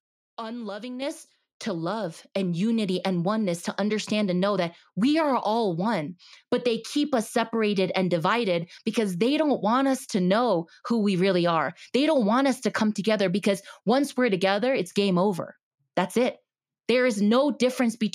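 Speech recording with a microphone volume stepped up at 1.02 s: the call software judged the input too quiet and raised the device's input volume in a single step of about 6 dB. The voice and the background noise jump louder together at that instant and stay at the higher level.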